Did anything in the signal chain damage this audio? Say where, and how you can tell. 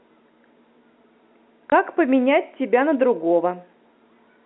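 Yes. The network stage caused packet loss filled with silence: a hard 20 ms gap from 1.70 to 1.72 s, consistent with a single lost 20 ms packet that the receiver replaced with digital silence. The G.711 telephone coding band limit is audible throughout.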